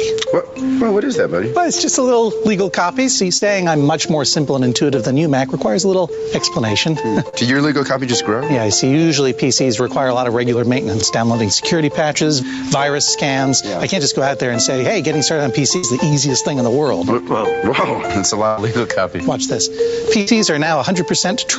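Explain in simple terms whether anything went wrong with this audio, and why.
A few things went wrong. Throughout, loud and soft parts are squashed closer together in level, which is gain pumping, likely from the mic gain set too high with a fast limiter clamping down.

Around 3.37 to 3.43 s and 7.29 to 7.35 s there's a brief smear where a sliver of audio never arrived and was patched over. That's short concealed packet loss.

Longer gaps at 15.77 to 15.85 s, 18.47 to 18.59 s and 20.21 to 20.29 s are a burst of packet loss. The sound stretches into a held buzz or fading hiss, then jumps ahead with a bit missing.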